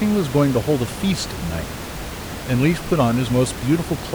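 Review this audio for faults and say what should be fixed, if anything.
Nothing stood out on listening to this speech recording, so there is nothing here that needs fixing.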